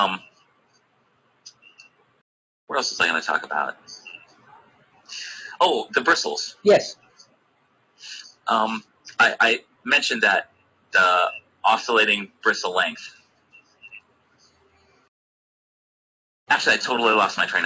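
A speech noise suppressor stays active throughout. It mistakes steady sound for noise, so the level swings by around 20 dB and the audio pumps. Sound is cut by the noise suppressor at 0.29–2.69 s, 3.76–5.08 s, 6.55–9.06 s, 9.62–9.85 s, 10.45–11.64 s, 12.28–12.43 s and 13.12–15.09 s. Held sound sinks by about 12 to 15 dB, and decays are cut short.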